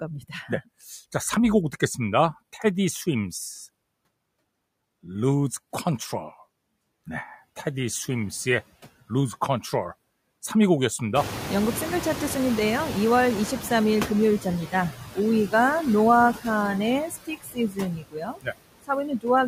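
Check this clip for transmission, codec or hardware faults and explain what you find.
Four kinds of fault are audible in this speech recording, all tied to the noise suppressor or to clock timing.

Noise suppressor artifacts, throughout: the suppressor cuts bands it judges to be steady noise by about 20 dB, frame by frame. The background drops away between phrases and swells back under speech.

Clock slip clicks, from 0.30 s to 19.47 s: faint regular ticks recur about every half second, roughly forty in all. The likely cause is two devices running on unsynchronised clocks, differing by something like 40 ppm, so a single sample is dropped or repeated each time the drift reaches a whole sample.

Noise suppressor catching up, 11.15 s to 14.20 s: the room noise jumps by about 22 dB near 11 s. The suppressor's noise estimate lags this rise, so at first the louder background passes with only about 8 dB of reduction, then sinks over roughly 3.05 s as the estimate adapts.

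Speech cut by the noise suppressor, 17.10 s to 17.79 s and 17.96 s to 18.54 s: the suppressor mistakes parts of the speech for noise and turns them down with the background, by up to about 16 dB and then about 20 dB. Those stretches sound swallowed and faint.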